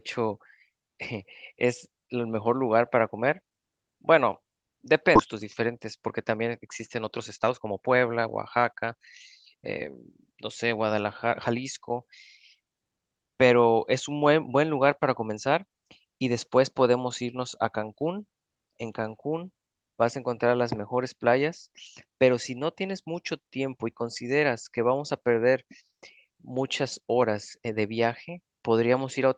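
At 5.15 s about a second of queued speech is dropped in a skip ahead, so playback jumps forward with almost no gap and words go missing. From 5.33 to 8.95 s, a jitter buffer speed-up trims short pitch-period slices to drain the backlog, so speech runs about 10% fast at unchanged pitch and sounds hurried.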